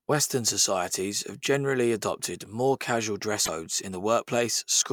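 Damaged data in a compressed stream corrupts a short stretch of this speech clip: some of the encoded bytes near 3.42 s are wrong, so the decoder misreads or discards the frames there, loses its place in the bitstream and has to hunt for the next valid frame header before normal decoding resumes. The result is a brief artefact from 3.42 to 3.49 s, roughly 64 ms long, heard as a sudden chirp, squawk, click or short hole that briefly replaces the speech.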